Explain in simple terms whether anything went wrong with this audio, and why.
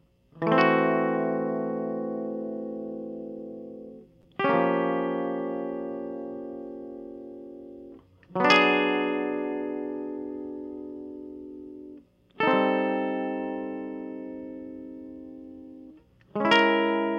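Nothing went wrong here.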